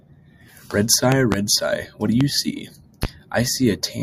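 Loud pops sit on top of the audio: a double pop at 1.12–1.36 s and single pops at 2.21–2.24 s and 3.03–3.07 s, likely from voltage transients.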